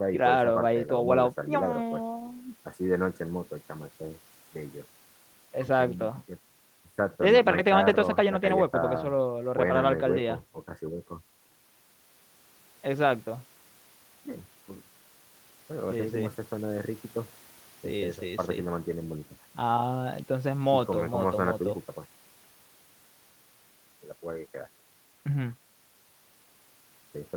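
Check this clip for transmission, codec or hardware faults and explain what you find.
No faults found in this recording.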